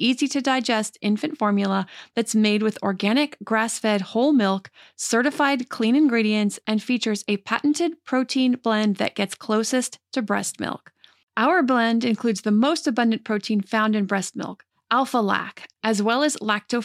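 At 5.05 s the stream likely skipped a couple of samples, a tiny fraction of a millisecond, so the waveform jumps straight to a later value. This dropped-samples fault removes no audible speech but produces a single sharp click.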